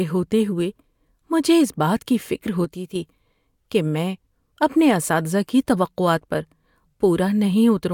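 Right after "اس بات کی فکر", at 2.65 s, there's a sudden gain jump: the level drops by about 5 dB in one step and stays down until 2.96 s, roughly a third of a second, before snapping back. The speech and the background noise fall and recover together, which gives it away as a digital gain change rather than anything the speaker did. It's likely a gain setting applied instantly instead of being ramped in.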